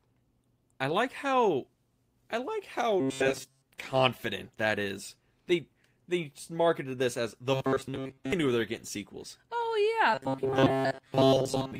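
A speech clip with robotic sound from repeated short buffers in three places: 3.00–3.66 s after "I like how", 7.54–8.33 s after "they marketed this as", and 10.15 s to the end. Each stretch turns into a rigid 134 Hz metallic buzz, likely from a roughly 7.5 ms chunk being replayed to cover most of the missing audio.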